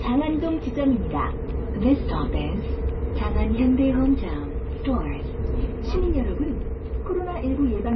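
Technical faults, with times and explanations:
Throughout: low-bitrate audio saved at a high bitrate. The sound is dull, with nothing above about 5.9 kHz, a flat ceiling on a spectrogram. This is likely a very low-bitrate MP3, around 23 kbit/s, later re-encoded at a high bitrate, which cannot restore the removed detail.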